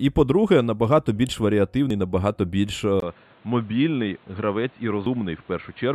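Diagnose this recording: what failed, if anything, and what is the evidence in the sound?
The speech jumps abruptly at 1.90 s, 2.74 s and 5.06 s, each time with a skip of roughly 50 ms of material. The stage is the driver or buffer, and the likely cause is a dropped buffer (overrun): the capture side failed to read a block before it was overwritten, so the surrounding audio is spliced together. The waveform shows a sudden discontinuity with no gap, and the spectrogram shows a thin vertical broadband line at each splice.

From 3.00 s to the end, the sound turns dull and boxy after a 20 ms silence. The input switched to a poorer device, at the capture or analogue stage, likely a fallback microphone or a headset call profile. On a spectrogram, the upper band falls away at 3.00 s, and a new noise floor appears about 30 dB under the speech. The waveform shows a brief flat gap, then an envelope about 5 dB lower.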